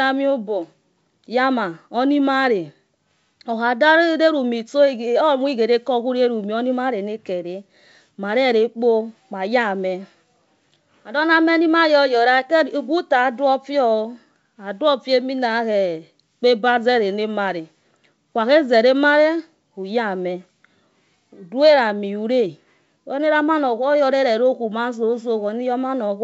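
A speech recording with no technical faults, carried over a WebRTC call path whose content stops at 8 kHz, which fits a wideband codec such as G.722 working as intended.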